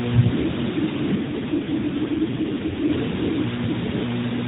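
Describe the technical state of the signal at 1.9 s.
At 1.9 s you're inside an AMR rate drop, running from 1.16 to 2.95 s. The link pushes the codec to fewer bits, so the speech goes rougher and more synthetic, which fits 12.2 falling to 5.9 kbps. Under that is low bit depth with dither: a steady, even hiss nearly as loud as the speech, with no distortion, consistent with roughly 4-bit resolution.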